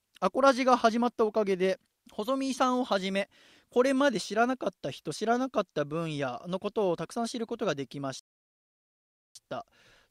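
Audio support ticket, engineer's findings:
Rebuffering stall, 8.19 to 9.35 s: speech drops to silence, then resumes exactly where it stopped. Player buffer ran dry; no content lost, about 1.16 s added.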